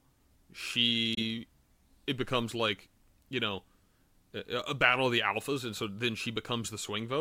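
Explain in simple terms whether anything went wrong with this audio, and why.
At 1.15 to 1.18 s the speech cuts out abruptly for a few hundredths of a second, then continues as if it had kept playing underneath. That is a Bluetooth dropout, likely one late audio packet to the headphones being discarded.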